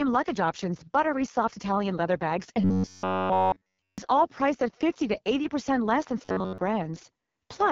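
A speech recording, coded throughout with the AMR wideband (HD Voice) codec at 6.6 kbit/s. That is the codec's lowest rate, and the damage is heavy. The voice sounds rough and raspy, and nothing reaches above 7 kHz. At this rate the vocal tract model and its pulse excitation are starved of bits. The top band is filled with shaped noise rather than real detail. From 2.62 to 3.98 s the voice becomes a rigid, metallic buzz at 93.8 Hz. It happens again, briefly, from 6.25 to 6.58 s. This is robotic sound from repeated short buffers. It likely comes from fresh audio arriving too late. The playback loops a chunk of about 10.7 ms instead, which forces that fixed pitch. In the first stretch essentially all of the sound is repeated. In the second most of it is, so the voice breaks through a little more.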